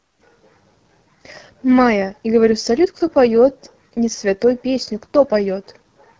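From start to finish, the speech carries the sound of the AMR wideband (HD Voice) codec. The damage is plainly audible. The band up to 6.4 kHz is rebuilt from a pulse-excited model of the vocal tract. Above that, up to 7 kHz, there is only shaped noise. The coarse coding leaves the speech rough and raspy. That roughness points to one of the codec's two lowest rates, which fits about 8.85 kbit/s.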